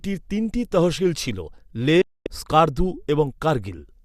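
Digital broadcast dropout from 2.02 to 2.27 s in this speech recording: the sound fades out within about 3 ms and stays silent for roughly a quarter of a second, as the receiver muted on a run of corrupt or missing frames, discarding that stretch of programme.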